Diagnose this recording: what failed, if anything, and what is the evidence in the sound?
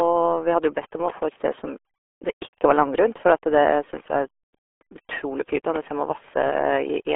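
Throughout the clip the speech is muffled and gargly, confined to roughly 300 Hz to 3.4 kHz, with nothing above 3.7 kHz. This is heavy damage from a RealAudio 14.4 codec stage. The coarse, band-limited modelling fits an 8 kbit/s dial-up speech codec.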